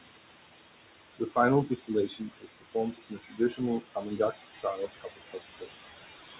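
Noise suppressor artifacts run through the whole clip. The suppressor pulls the steady room noise down by about 18 dB between phrases. That noise sits only about 6 dB below the speech.

Speech cut by the noise suppressor comes in five stretches: 1.19 to 1.37 s, 1.66 to 1.9 s, 2.07 to 2.76 s, 2.92 to 3.6 s, and 3.8 to 5.72 s. The suppressor mistakes quiet parts of speech for noise. It drops them by about 16 to 21 dB. Soft sounds and endings turn faint or swallowed. The last stretch is the longest, with about a second affected. Nothing is heard above 4 kHz, which fits a G.711 A-law call path.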